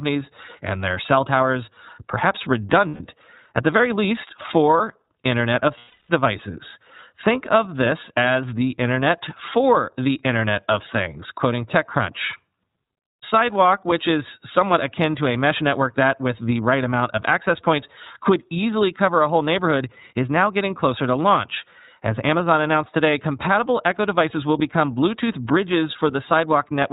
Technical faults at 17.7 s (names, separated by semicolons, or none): iLBC codec